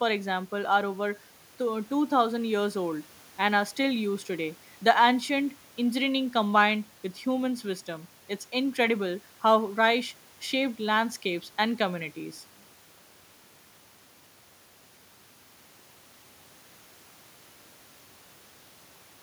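No technical faults are audible anywhere in this speech recording.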